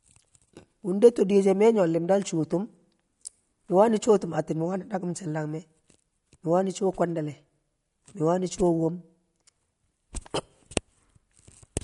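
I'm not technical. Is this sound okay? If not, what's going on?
No. Throughout the whole clip, the speech has a watery, swirly quality, and there is no sound at all above 11.2 kHz, so it sounds dull and muffled. This is likely MP3 compression. To save space, the format throws away the highest pitches entirely and keeps fewer details. Quieter details flicker in and out from moment to moment, which produces that bubbly, underwater texture, and the sharp starts of sounds get smeared.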